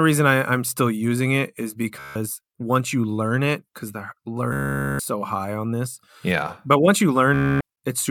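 Bluetooth stutter: packets arrived late or not at all, so the receiver kept replaying its last short buffer. At 1.99–2.16, 4.53–5.00 and 7.34–7.61 s, speech breaks into a buzzing, machine-gun repeat, then jumps ahead, skipping about 160, 460 and 260 ms.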